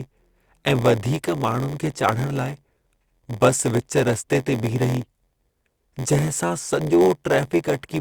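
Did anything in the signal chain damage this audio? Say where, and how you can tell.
Yes. A block size mismatch (padded) at the driver or buffer stage runs throughout. Zero-filled gaps buzz at 86.1 Hz, and the speech runs at 0.938 speed with unchanged timbre, which fits 512-sample reads.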